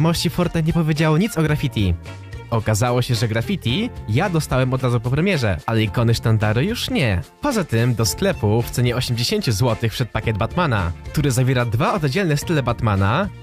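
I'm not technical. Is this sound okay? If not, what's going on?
Yes, this sound is okay, and nothing is going wrong in it.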